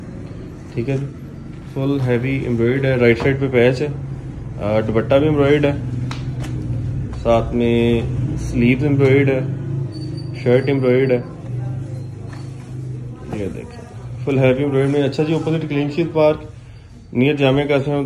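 A faint hiss and grainy roughness rides along with the sound for the whole clip. It thickens on loud passages and bright, high-frequency content and drops away whenever the audio goes quiet. This is sample clock jitter. The converter's timing wanders by something on the order of a microsecond or two, so each sample lands slightly off its proper instant. Steep, fast-changing parts of the waveform turn that timing error into a noise floor roughly 45 dB below the signal.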